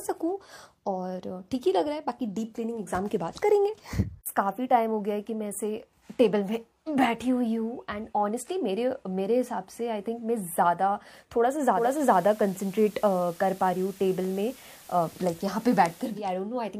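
From 11.70 to 16.23 s, digital radio blending to analogue: a 0.23 s cross-fade to FM adds hiss about 25 dB below the signal and a level shift of about 2 dB, with no silent gap as in a dropout.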